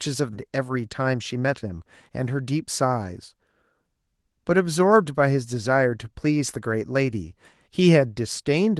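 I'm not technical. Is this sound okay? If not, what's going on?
No. At 0.33 s there is a skip ahead: about three-quarters of a second of the speech is simply missing, and the sound on either side is joined almost directly. The call system threw away audio it had fallen behind on so it could catch up. Unlike a dropout, there is no silent gap or filler noise; the speech just jumps forward, so part of what was said is lost without any pause to warn you.

From 0.43 s to 2.10 s comes a jitter buffer speed-up. The speech runs about 7% fast, which makes it sound slightly rushed. The receiver had built up more waiting audio than it wanted, so it trimmed many tiny slivers, about 0.15 of a second in all, to shrink the delay gradually. The pitch stays the same, so the speech sounds hurried but not squeaky, the way a sped-up tape would.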